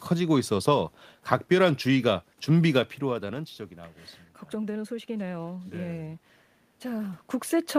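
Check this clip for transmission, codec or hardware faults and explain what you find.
Nothing stood out on listening; the speech carries some background noise from the room and its level shifts around 3 s and again near 7 s as the talker moves relative to the microphone, but both belong to the recording itself.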